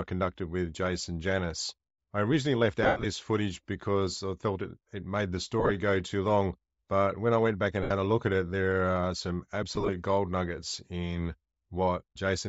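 From the start, the speech has a breathy, grainy edge and a dulled top end. This is plainly audible Bluetooth LC3 compression. The likely cause is a bitrate of around 32 kbps, low enough that the codec discards much of the upper spectrum and fills the gap with noise. The short-grained texture points to 7.5 ms frames.

From 2.83 to 3.06 s, between "I originally left" and "footage because I felt", lost LE Audio frames cause a dropout. About 150 ms is missing, spread over 210 ms, with one gap of roughly 100 ms. The decoder keeps replaying the last spectrum with scrambled phase. The sound turns to a noisy smear and then fades.

From 5.60 to 5.71 s, about 68 ms is lost in brief bursts. The result is a patchy, hissy stutter.

From 7.83 to 7.91 s, between "I went back and" and "a look at it", 75 ms is lost. It becomes a smeared blur.

From 9.69 to 9.90 s, between "it there are some" and "gold nuggets in", about 105 ms is lost. 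It is scattered across roughly 200 ms in short gaps and sounds grainy and broken.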